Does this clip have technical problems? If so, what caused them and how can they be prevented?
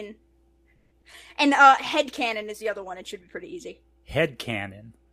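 Yes. There's a steady 60 Hz mains hum under the whole clip, about 35 dB below the speech, from a ground loop or transformer. Fix the grounding or reroute cables.

From 0.75 to 0.93 s a call audio freeze stretches the last sound into a fading buzz, likely a jitter buffer starving while packets stalled. A larger jitter buffer helps.

Short concealed packet loss hits at 1.01–1.04 s and 1.12–1.30 s, giving brief smears where the decoder patched missing audio. Better network paths or forward error correction prevent this.

A call bitrate drop from 48 to 17 kbps between 1.68 and 3.59 s makes the speech rough and muffled. Keeping bandwidth headroom avoids it.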